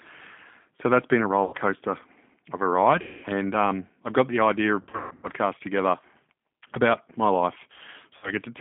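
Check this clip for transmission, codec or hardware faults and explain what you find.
Two faults are present in this speech clip.

The G.729 codec runs throughout, band-limited to 200 Hz to 3.5 kHz. Its 8 kbit/s pulse-and-filter rebuild leaves a plainly audible synthetic roughness rather than the smeared, swirly quality of a transform codec.

VoIP packet loss concealed by the speech codec occurs four times:
1.44 to 1.55 s, after "that's been a", with 90 ms lost.
3.02 to 3.26 s, after "of a", with 210 ms lost.
4.81 to 5.28 s, after "I've got the idea", where 330 ms of losses are scattered over 420 ms, the longest run being 150 ms.
8.17 to 8.31 s, with 60 ms lost.

In each gap the decoder extends its last pitch and filter into a fading buzzy tone or coloured noise, not a hard dropout or a click.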